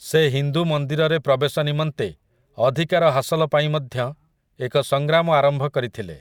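No technical faults can be heard anywhere in the recording; the speech signal stays continuous and steady throughout.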